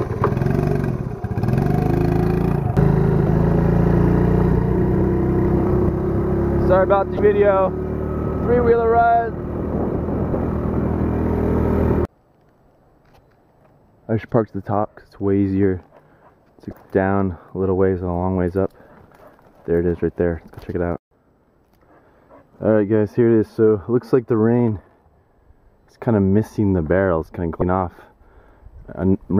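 Damaged data in a compressed stream appears at 3.24–3.28, 7.16–7.19, 10.32–10.35, 16.70–16.73 and 27.59–27.62 s. Corrupted bytes make the decoder misread frames and lose sync until it finds the next header, giving short blips of about 30 ms.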